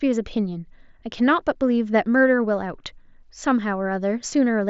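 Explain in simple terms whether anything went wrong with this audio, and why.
Nothing went wrong: the speech comes over a Bluetooth headset's normal mSBC wideband link, which by design carries nothing above about 7.7 kHz, and no fault turns up anywhere in the recording.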